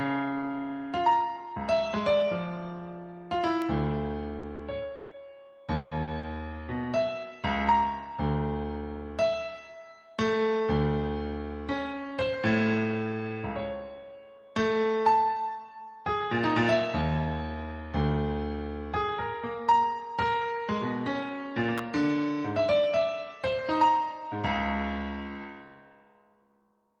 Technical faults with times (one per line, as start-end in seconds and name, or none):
3.62 electrical switching spike
4.39-4.62 short concealed packet loss
4.95-5.14 long network dropout
5.75-5.94 long network dropout
6.03-6.26 short concealed packet loss
21.78 electrical switching spike